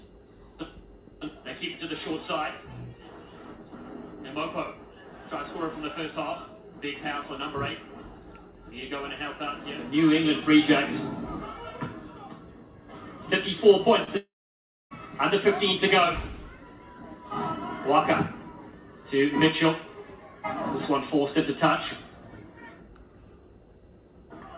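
Audio carried over a WebRTC call path with G.711 A-law coding at 64 kbps, so nothing above 4 kHz survives. A short concealed packet loss occurs from 14.04 to 14.09 s: about 20 ms of packets arrived too late, and the decoder patched roughly 28 ms by extending the preceding sound before blending back, heard as a brief smear or wobble. Just after, from 14.17 to 14.93 s, the sound is likely cut by a long network dropout. Around three quarters of a second of audio never arrives, the concealment buzz or hiss fades within about a tenth of a second, and roughly 0.62 s of silence follows before the audio resumes with that stretch missing.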